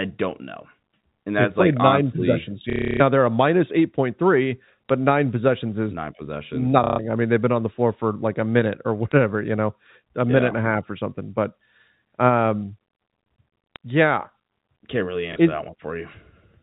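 At 2.7 to 3.0 s, 6.84 to 6.99 s and 15.33 s, packet loss with the last packet repeated replays one chunk; the first two runs make a robotic buzz near 33 Hz, which fits 30 ms packets, and the single repeat at 15.33 s is a small blip. Plain loss would leave silent gaps instead. The telephone-band G.711 sound stays intact throughout.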